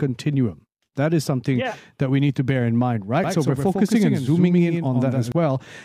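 From 3.24 to 5.32 s, after "to bear in mind", a doubled audio track appears: a full-band copy roughly 100 ms late and about 5 dB quieter, likely from a slower second capture path. The waveform shows stacked, offset onsets, and the spectrogram shows each syllable paired with a shifted twin, the copy starting and stopping abruptly.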